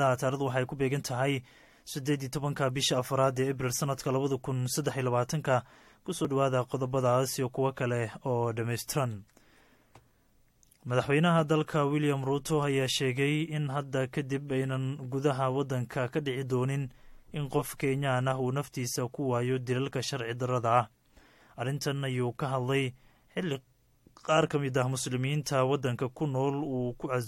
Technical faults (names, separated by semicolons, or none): compressed frames skipped; corrupt frame decoded